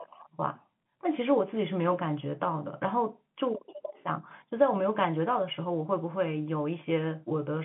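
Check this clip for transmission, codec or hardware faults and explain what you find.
Nothing stood out on listening to this telephone-band speech, which carries the narrow character of an ordinary G.711 landline call.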